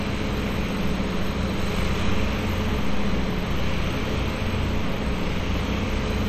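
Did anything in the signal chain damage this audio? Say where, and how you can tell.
Yes. Throughout, the sound rings and smears, with a washy hiss breathing alongside it. This is likely WMA compression at the codec stage, consistent with a low bitrate around 48 kbps.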